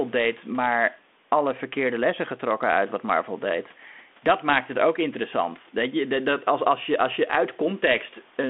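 Speech recording with no technical faults to report.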